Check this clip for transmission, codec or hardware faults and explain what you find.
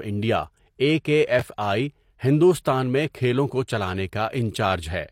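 One transmission fault is audible: chunks out of order, from 1.39 to 1.42 s. A 5.8 ms chunk arrived or was written late and played after the three chunks meant to follow it. Nothing is lost, but the reordering leaves three hard joins and a brief garbled, jumbled moment in the speech.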